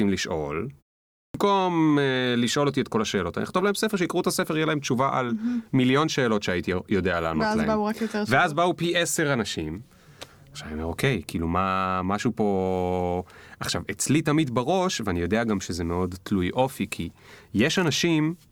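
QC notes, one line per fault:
1.19–1.34 s, clipped start after a pause: following a 0.45 s silence, the output device had gone idle and needed time to wake and relock, so about 154 ms of speech is swallowed and the sound starts abruptly without its first sounds.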